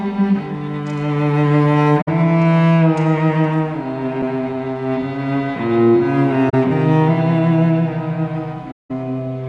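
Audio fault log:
2.01–2.08 s, 6.49–6.54 s and 8.71–8.91 s: AAC frame loss with muting. The sound drops to silence for about 64 ms, 43 ms and 192 ms, which fits 3, 2 and 9 lost frames. The decoder zeroed them, and the overlapping windows fade the sound out and back in.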